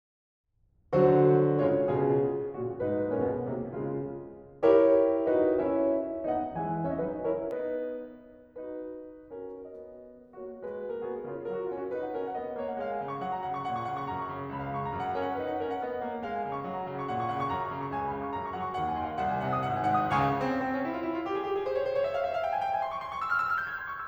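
A music recording with de-emphasis applied wrongly from the start to 7.51 s. A treble cut meant to reverse pre-emphasis was applied where none existed or was applied twice. The top end slopes away smoothly, down about 11 dB at 10 kHz relative to 1 kHz. It sounds dull and muffled.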